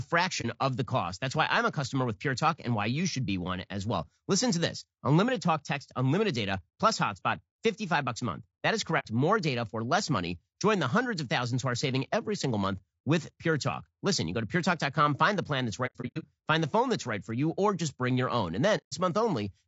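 This speech clip was most likely encoded with low-delay AAC compression of the AAC-ELD kind at a low rate, around 32 kbps. The low bitrate leaves too few bits to code the spectrum cleanly, so the speech sounds plainly rough and grainy throughout, with noise filling the gaps between harmonics and a thin, synthetic-sounding top band. AAC frame loss with muting also occurs: the decoder zeroed missing frames, and the overlapping windows fade each gap out and back in. This happens at 0.41 s (30 ms, just before "of the cost"), 8.99 s (60 ms), 15.86 to 16.25 s (240 ms of holes scattered over 360 ms, the longest run roughly 100 ms, between "find the plan that's" and "find the phone that's"), and 18.77 s (150 ms).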